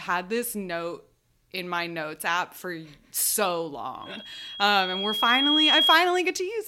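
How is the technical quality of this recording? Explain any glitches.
The speech is marred by one clear problem near the end. Right after "notes app for so", at 4.02 s, a loudspeaker feedback squeal starts. The mic is hearing its own speaker, and the loop gain tops one at 3.3 kHz. That tone swells over about a second and a half to roughly 10 dB above the speech, then runs until 5.99 s.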